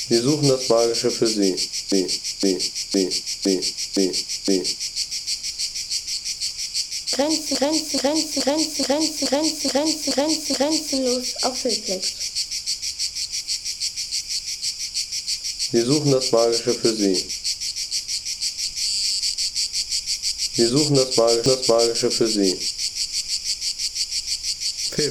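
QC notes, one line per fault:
1.92–4.99 s: repeated frames. The same 512 ms block plays six extra times, adding 3.07 s. It is heard as a looping stutter. The decoder receives identical compressed data again and replays it.
7.55–10.96 s: repeated frames. A 426.7 ms block plays eight extra times, adding 3.41 s. The loop is quicker.
21.46–21.97 s: repeated frames. One extra play of a 512 ms block adds 0.51 s and is heard as a single jump back.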